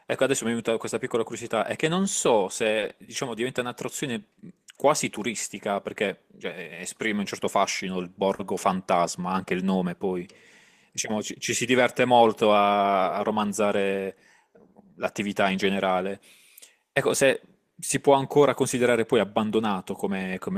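At 2.79 to 2.84 s and again at 8.35 to 8.41 s, the speech briefly hangs: a short stall from a late packet. Each time the jitter buffer ran dry, so the receiver held the last sound for 30 ms and then 40 ms, with a slight buzz or dip, until the packet turned up. Unlike a dropout, no speech is skipped. It resumes exactly where it paused, now running 30 and then 40 ms later.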